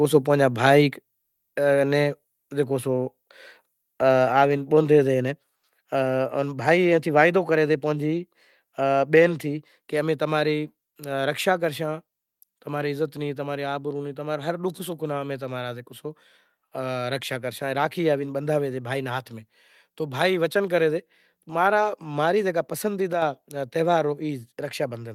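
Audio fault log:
5.55–5.63 s, comfort noise in place of the background: For about 80 ms the real background drops out. A flat, featureless hiss takes its place, about 8 dB quieter. The background here sits about 50 dB below the loudest speech. The transmitter likely stopped sending during this pause, and the receiver filled the gap with generated noise, as an Opus DTX decoder does. The room's natural texture vanishes and then returns when the sound resumes.
9.42 s, microphone volume stepped down: Speech and background fall together by about 2 dB in a single step. The change is small but abrupt, with no fade. The likely cause is the call software cutting the microphone's input volume at the device after judging it too hot. Because the step happens before any processing, everything in the signal drops at once and stays lower afterwards.
23.13–23.22 s, sudden gain jump: The level lurches by about 6 dB between neighbouring samples, and this lasts for roughly 90 ms. 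Speech and background noise move together, so the whole signal sounds pushed down rather than faded. The likely cause is a digital gain change applied instantly, without a ramp. With no smoothing, the waveform steps at the boundaries, which makes the jump sound hard and unnatural.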